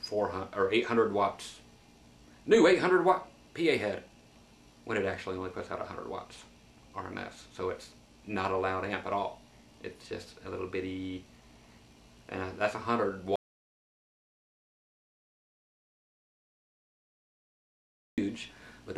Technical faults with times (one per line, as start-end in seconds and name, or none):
13.36-18.18 audio dropout to silence